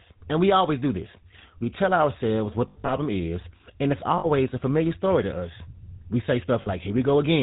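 The whole clip of speech has passed through the GSM full-rate codec. It rebuilds the voice from a vocal-tract model excited by sparse, regularly spaced pulses, with nothing kept above 4 kHz, which fits the 13 kbps full-rate codec. The result is plainly audible throughout: a dull, band-limited sound with a buzzy, gravelly roughness laid over every syllable.

Lost GSM frames follow. From 2.68 to 2.93 s, between "tell ourselves what" and "is and it's", the decoder lost about 140 ms of audio, scattered in short gaps over roughly 200 ms, the longest run around 70 ms. Each time it reused the last good frame's settings, so the sound smears into a rough, metallic ringing. At 4.18 to 4.27 s, just before "a familiar story to", a 60 ms loss produces the same brief metallic hold, and at 6.62 to 6.67 s a 40 ms loss gives a shorter blip of it.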